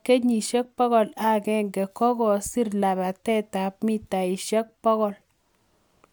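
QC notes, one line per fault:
Nothing stood out on listening to the speech.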